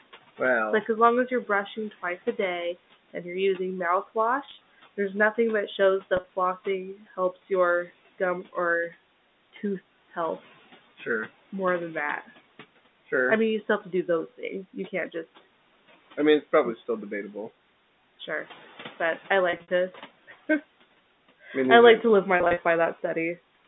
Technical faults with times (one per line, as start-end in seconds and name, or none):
4.45-4.61 packet loss with pitch repetition
6.17-6.28 packet loss with pitch repetition
19.50-19.70 packet loss with pitch repetition
22.37-22.59 packet loss with pitch repetition